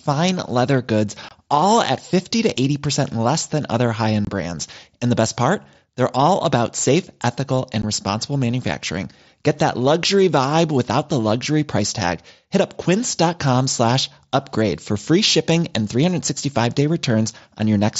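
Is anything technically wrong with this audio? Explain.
Yes. Unconcealed Bluetooth headset packet loss leaves three gaps in the wideband mSBC headset audio. They fall at 1.29 to 1.31 s after "leather goods", at 4.25 to 4.27 s after "less than other high", and at 7.82 s before "responsible manufacturing". Voice packets never reached the phone, and nothing filled the gaps. The holes last 22.5 ms, 22.5 ms and 15 ms, and each has abrupt edges.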